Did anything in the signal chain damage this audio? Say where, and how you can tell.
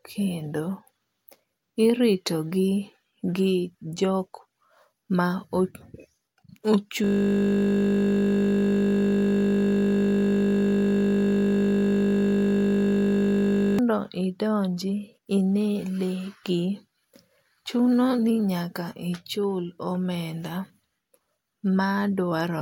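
Yes. A system hang loop at the driver or buffer stage: from 7.04 to 13.79 s, one 20 ms slice repeats hundreds of times as the hardware recycles its ring buffer, producing a steady 50 Hz buzz. A spectrogram shows flat harmonic lines at 50 Hz multiples, and the waveform shows one identical repeating cell.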